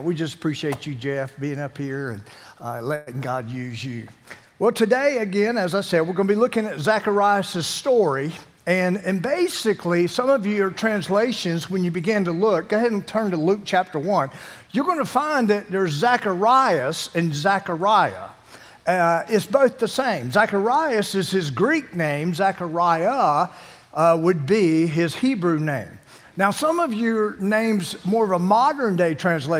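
Packets were most likely held up in transit and the jitter buffer ran dry at 2.95 to 3.09 s, producing a call audio freeze: the last sound is stretched into a fading buzz or hiss for about 114 ms. The audio then resumes where it stopped, so nothing is lost, but it now runs that much later. From 8.45 to 10.27 s the jitter buffer held more audio than its target, so it cut out short pitch-period slices in quick succession. This jitter buffer speed-up plays that stretch about 106% fast at unchanged pitch, removing roughly a tenth of a second and giving a slightly hurried feel.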